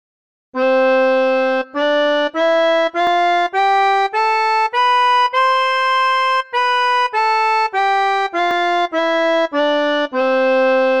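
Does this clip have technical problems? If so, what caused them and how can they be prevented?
Yes. Dropped buffer (overrun) at 3.07 s and 8.51 s: each is a point where the sound jumps ahead, with about 10 ms missing and no gap. The likely cause is the recording software failing to read its buffer before the hardware overwrote it. Giving the capture process higher priority or a larger input buffer would prevent this.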